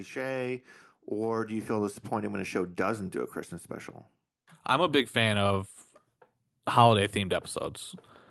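Automatic gain rising from 0.12 to 3.09 s: the gain control judged the input too quiet and lifted it by about 6 dB, so speech and background swell together.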